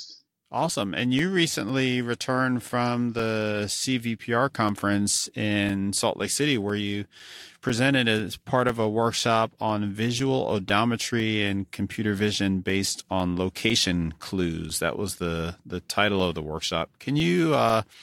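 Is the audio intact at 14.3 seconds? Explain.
No. At 14.3 seconds the speech falls inside a run of periodic USB or driver dropouts lasting from 0.20 to 17.70 s. Every 0.5 s, something blocks the audio path, and a few milliseconds of signal are replaced by silence. Each gap that lands on speech sounds like a regular tick.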